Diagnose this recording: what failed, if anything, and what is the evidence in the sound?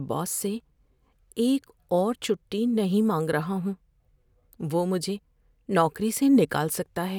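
Nothing failed in this speech recording. No stage of the chain, from capture through to playback, leaves any audible evidence of a problem.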